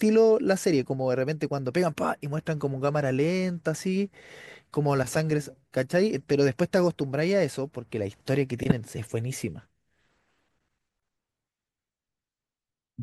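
At 8.63 s the speech is interrupted by a corrupt frame decoded: for about 90 ms, to 8.72 s, a short chirpy burst of noise sits on top of the voice. Flipped bits in a few consecutive compressed frames led the decoder to apply wrong gains and misplace energy across frequencies, so the burst peaks near -10 dBFS. Unlike concealment of a lost frame, which smooths over or repeats sound, this adds new, unrelated energy.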